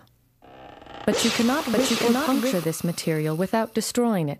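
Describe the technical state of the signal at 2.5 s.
At 2.5 s the signal carries a doubled audio track, present from 1.26 to 2.64 s. A second full-band copy of the sound runs roughly 0.7 s behind the original at about the same level, with no decay or added room colour, so two overlapping streams are heard rather than an echo. The likely cause is a second, slower capture path or an edit leaving two copies out of step. The copy ends abruptly at 2.64 s.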